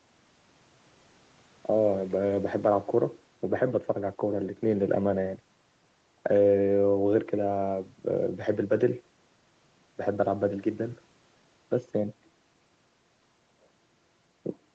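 Speech with no technical faults; content stops at 8 kHz, as expected from the call's microphone processing and its Opus call path, which is working normally.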